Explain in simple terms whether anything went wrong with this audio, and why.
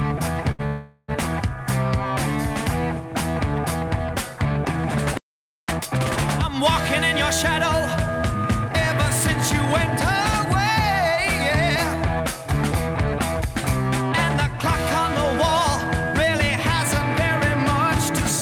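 Several things went wrong, in a chain of delays and catch-ups.

From 0.51 to 0.61 s there is a short stall from a late packet. One packet arrived late, so the last sound was held for 74 ms. Nothing is lost.

From 0.67 to 1.10 s a call audio freeze follows. The sound turns into a fading buzz or hiss for 414 ms, likely because packets were held up in transit. It then resumes where it stopped.

From 5.17 to 5.69 s there is a playback stall. The sound stops dead for about half a second, likely because the player ran out of data.

From 5.69 to 6.19 s comes a time-compressed catch-up. The player plays at double speed to recover the lost time. Pitch stays normal, but the sound is rushed.

From 12.15 to 13.46 s there is a jitter buffer speed-up. Too much audio had piled up, so tiny slices were trimmed out, roughly a tenth of a second in total. The sound runs 7% faster at the same pitch.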